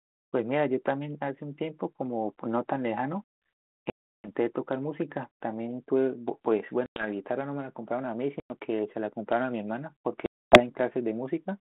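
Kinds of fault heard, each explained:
Packet loss on an ADPCM call: four hard-edged silent holes of 100 to 340 ms, the sound returning slightly distorted as the decoder's predictor resynchronises.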